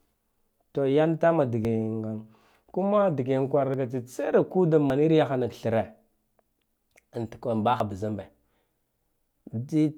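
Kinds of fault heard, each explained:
Dropped buffer (overrun): The speech jumps forward at 1.65, 3.74, 4.90, 6.46 and 7.80 s, likely because the recording side failed to read its buffer before it was overwritten. Each loss is a few tens of milliseconds, longest near 4.90 s. Unlike a dropout or underrun, no silent gap or stall is inserted; the audio either side is spliced straight together, so the skip is heard as a missing sliver rather than a pause.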